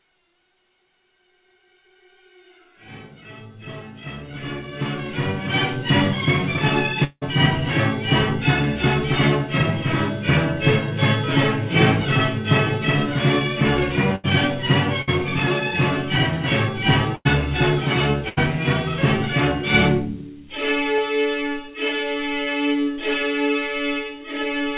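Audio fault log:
7.04–7.23 s, long network dropout: The sound suddenly stops moving forward. The last sound is held as a buzz or hiss for about 0.17 s and fades as it goes. About 40 ms of near silence follows before the audio returns. The return picks up further on, and roughly 180 ms of material never plays. The likely cause is a stall in arriving audio. The receiver stretches what it last had, then gives up.
14.15–14.26 s, 15.02–15.09 s, 17.15–17.27 s and 18.29–18.39 s, burst of packet loss: Each is a short hole of 60 to 100 ms. The previous sound is repeated and turned down through the gap. Voiced parts become a brief held buzz, and other parts become a fading hiss. Playback then jumps ahead, and the lost stretch is gone. The filled sound stays dull, since nothing passes above 4 kHz, which fits a G.711 A-law call path.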